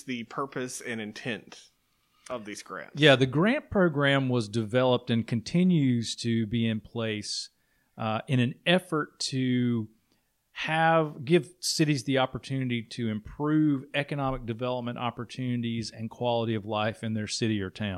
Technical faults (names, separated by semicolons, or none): none